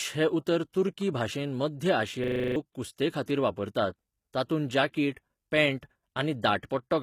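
Low-bitrate HE-AAC compression, likely around 20 kbps, runs throughout: the treble is rebuilt from copied lower bands, so sibilants sound gritty, metallic and lispy.

From 0.72 to 0.74 s, between "हें उतर" and "तुर्की भाशेंत", pre-echo appears: codec noise spreads about 20 ms ahead of a sharp attack, giving a brief hiss and a softened onset.

From 2.24 to 2.56 s, a system hang loop occurs: a stalled computer or driver leaves the hardware replaying one 40 ms buffer eight times, a 25 Hz buzzing stutter that replaces roughly a third of a second of audio.

At 3.25 to 3.28 s, pre-echo returns, with about 27 ms of noise smeared before an attack as hiss.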